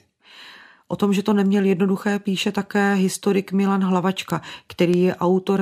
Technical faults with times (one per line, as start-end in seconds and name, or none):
0.20-5.57 word clock ticks